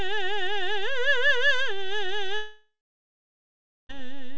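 A DC offset runs through the whole music clip. The waveform sits shifted from zero by a constant amount. You cannot hear it as such. It wastes headroom and shows as steady energy at the very bottom of the spectrum.

From 2.36 s to 3.91 s comes a long network dropout, likely from audio that never arrived. The last sound is stretched into a fading buzz. About 1.16 s of near silence follows. The music resumes at 3.91 s with roughly 1.5 s missing. The band stops at 8 kHz, which fits G.722 at 64 kbps.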